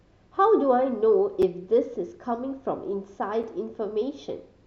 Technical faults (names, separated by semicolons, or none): gap between chunks